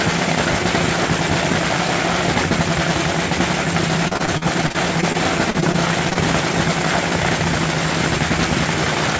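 From 4.08 to 6.17 s, repeated packet loss (robotic sound) sets in. Packets keep arriving late or not at all, and each short hole, the longest 41 ms, is patched by stretching the previous sound. The result is choppy audio with fragments missing.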